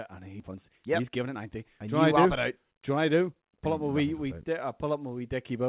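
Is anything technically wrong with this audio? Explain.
Yes, there are two related problems.

Around 0.40 to 0.42 s there's a skip ahead. Roughly a second of speech is simply gone: it was dropped while later audio was already queued, and nothing was filled into the gap. The audio on either side of the jump gets butted together almost directly, so the speech lurches forward with no pause to mark the lost material.

Right after that, from about 0.43 to 3.81 s, you get a jitter buffer speed-up. The buffer was still holding more audio than it wanted, so the receiver kept trimming out tiny slices one or a few pitch periods long, over and over, taking out roughly half a second in total. The speech plays at about 117% speed while the pitch stays where it was, so it sounds rushed rather than chipmunky. All of this comes through a narrowband call path with nothing above 4 kHz, which fits G.711.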